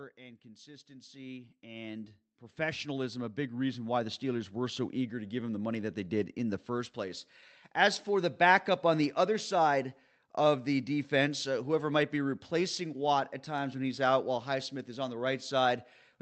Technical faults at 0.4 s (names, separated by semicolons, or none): automatic gain rising